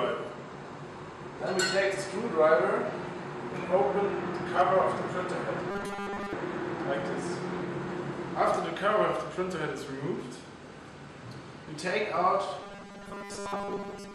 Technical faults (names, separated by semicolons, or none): robotic sound from repeated short buffers